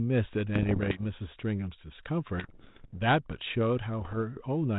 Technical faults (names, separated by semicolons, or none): bit errors on an ADPCM link